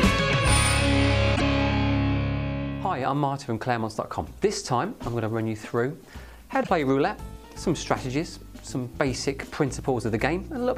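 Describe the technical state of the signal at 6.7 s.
Damaged data in a compressed stream runs from 6.60 to 6.69 s, a span of about 0.1 s ending just before the moment asked about. A stretch of the encoded stream arrives corrupted, so the decoder cannot interpret those frames correctly, loses its framing and has to hunt for the next valid frame header before normal decoding resumes. The result is a short, harsh chirp or blip that interrupts the sound.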